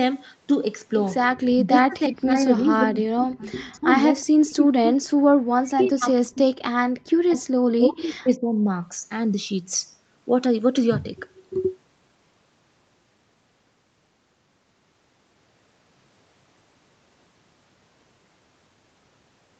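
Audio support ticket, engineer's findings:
Speech suppressed in double talk, 1.4–4.12 s: speech ducks and breaks up in pieces, about 35 dB at worst, roughly 2 s affected in total. Likely the echo canceller during double talk, attenuating the near talker along with the echo. Same at 4.28–6.64 s: gaps reach about 40 dB, around 2 s lost. Again at 7.17–8.55 s: dips to about 40 dB, about 1 s chopped out.

Echo leak, 6.97–7.01 s: a brief faint repeat of the speech, about 30 dB below it and trailing by 369 ms. Probable component is the far end's loudspeaker echo canceller, likely letting residual loudspeaker pickup through, so a scrap of delayed echo comes back across the call.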